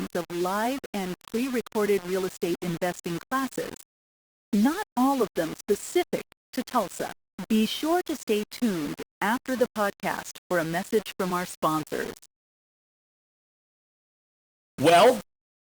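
Throughout, the speech sounds grainy and gritty, with the quietest parts sputtering: low bit depth without dither, likely rounding to about 5 bits, leaving distortion roughly 20 dB below the signal.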